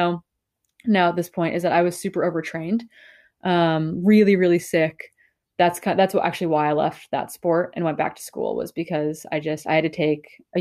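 No technical faults can be heard in this recording.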